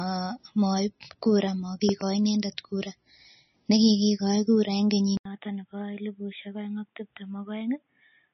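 Throughout, the speech sounds watery and swirly, likely from MP3 compression at a low bitrate around 25 kbps; the spectrogram shows a hard ceiling at 5.9 kHz with flickering holes below it. Between 1.89 and 2.03 s, a loud pop arrives as two sharp clicks roughly 10 dB above the speech, likely a voltage spike, seen as two tall narrow spikes on the waveform. At 5.17 s, after an 80 ms gap, the sound turns dull and boxy to the end. This is likely an input switched to a poorer device: the spectrogram ceiling falls to 3.8 kHz, the waveform shrinks by about 10 dB, and a faint noise floor appears roughly 50 dB down.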